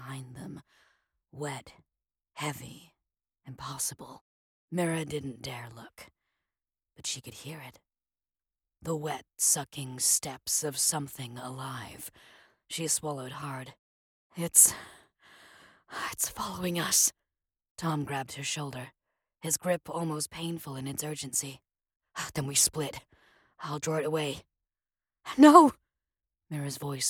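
No dropouts, clicks, distortion or timing errors turn up anywhere in the recording.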